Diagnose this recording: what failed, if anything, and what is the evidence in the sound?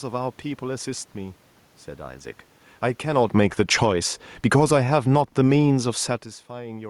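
Call-processing automatic gain falling: from 3.02 to 4.81 s, speech and room noise sink together by about 11 dB as AGC lowers gain.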